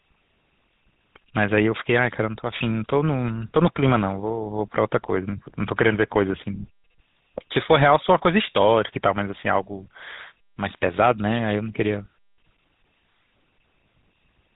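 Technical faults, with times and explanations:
Throughout, GSM full-rate codec: speech stops above 4 kHz and has a buzzy, gravelly roughness from pulse-driven excitation, unlike simple band-limiting; fits 13 kbps.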